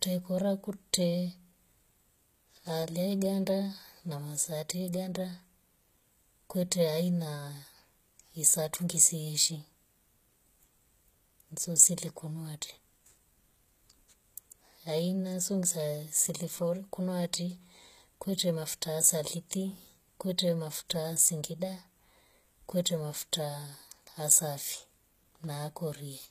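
Throughout the speech, the s sounds come out gritty and metallic, and nothing remains above about 14.9 kHz. This is likely HE-AAC compression at a low rate near 20 kbps, where the treble is rebuilt from copied lower bands rather than coded directly.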